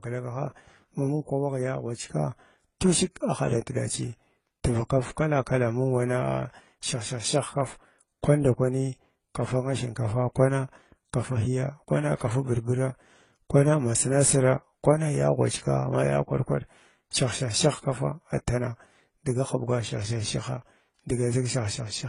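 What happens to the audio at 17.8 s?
At 17.8 s the speech carries the same degradation heard across the whole clip: nothing remains above about 10.9 kHz, and the sound has layered artefacts, with the different codecs' artefacts heard together. This is likely transcoding between lossy codecs, which fits low-bitrate AAC-LC followed by HE-AAC at around 24 kbit/s. The second encoder spent its limited bits re-coding the first one's artefacts and added its own, and the lower cut-off stayed in place.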